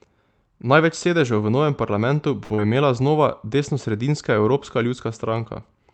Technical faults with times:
2.43-2.53 short stall from a late packet
2.54-2.61 short concealed packet loss

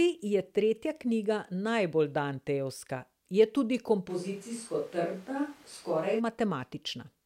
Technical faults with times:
4.10-6.18 switch to a distant microphone

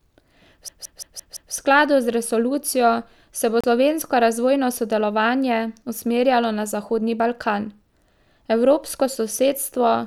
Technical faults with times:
0.68-1.54 system hang loop
3.61-3.64 Bluetooth stall

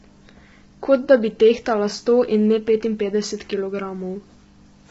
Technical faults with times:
0.00-4.90 low-delay AAC compression

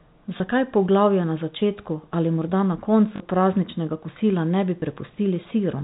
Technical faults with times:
0.38-0.40 packet loss with last packet repeated
3.16-3.20 packet loss with last packet repeated
4.80-4.82 packet loss with last packet repeated

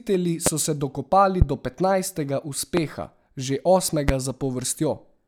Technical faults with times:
0.46-0.49 loud pop
1.42-1.44 loud pop
2.77-2.80 loud pop
4.09-4.11 loud pop

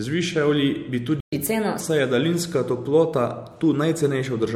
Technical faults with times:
1.20-1.33 playback stall
1.33-1.81 catch-up at higher speed

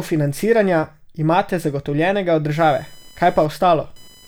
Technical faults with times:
2.56-4.27 computer activity noise

